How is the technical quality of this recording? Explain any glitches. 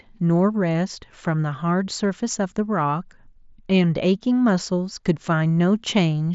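No glitches can be heard anywhere in this recording.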